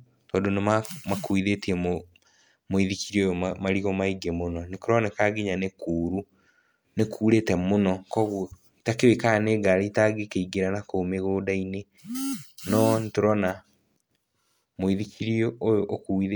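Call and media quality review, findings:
No audible faults found.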